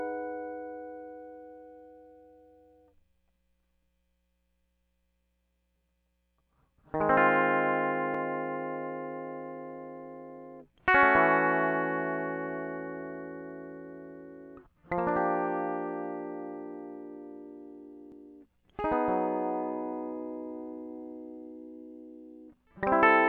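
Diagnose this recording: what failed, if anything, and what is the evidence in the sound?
The music skips twice, at 8.15 s and again at 18.12 s. Each time roughly 30 ms of audio drops out and the two sides butt straight together with no gap of silence, so the music lurches forward. The ten-second spacing is the giveaway: this is most likely audio missing between chunks at the driver or buffer stage, where a short piece is lost each time one 10 s block closes and the next opens.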